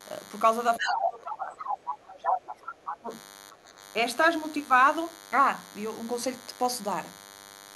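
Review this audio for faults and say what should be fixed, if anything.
A DECT cordless phone buzz runs through the whole speech clip: a thin, steady 100 Hz buzz with a dense harmonic series, about 20 dB below the speech. A nearby DECT handset or base emits a radio burst every 10 ms, and the audio circuit rectifies it into the signal. Moving the DECT base away from the recording chain, or using shielded cabling, prevents it.

The other side's voice leaking through appears from 0.76 to 1.11 s and 1.44 to 1.78 s at about 5 dB below the talker, and from 2.23 to 2.96 s at about the talker's own level. This is likely loudspeaker playback that the echo canceller failed to remove from the microphone. Using a headset, or retuning the echo canceller, prevents it.

Speech suppressed in double talk pulls the talker's level down by roughly 20 dB from 0.78 to 1.61 s, from 1.89 to 2.66 s, and briefly from 3.00 to 3.11 s. 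The first two dips overlap the leaked voice, likely the echo canceller attenuating both signals when it could not separate them. Better double-talk detection in the canceller prevents it.

Background gated by the echo canceller drops the room sound by about 9 dB from 3.53 to 3.66 s, then it recovers. The canceller clamped the microphone hard while the loudspeaker played. Gentler suppression, or comfort noise to fill the gap, prevents it.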